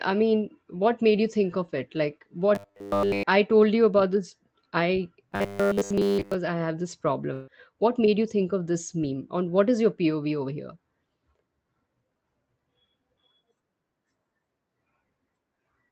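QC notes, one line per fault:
2.55–3.23 s and 5.33–6.35 s, robotic sound from repeated short buffers: audio likely arrived too seldom, so the player kept replaying a 10 ms slice, forcing a rigid 100 Hz metallic buzz. The first, just before "I told you about", is wholly robotic. The second, between "you about this I" and "I have this", is mostly robotic.
7.33–7.49 s, burst of packet loss: right after "I have this", about 140 ms of speech never arrived in time. The receiver filled the gap by stretching and fading the last sound, with no silence, then jumped ahead with that stretch of speech missing.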